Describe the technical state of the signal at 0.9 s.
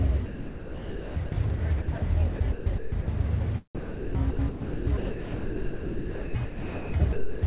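At 0.9 s the sound is choppy, within a stretch from 0.26 to 1.32 s. This is likely sound chopped by the voice detector: transmission kept switching off, and 960 ms was filled with comfort noise.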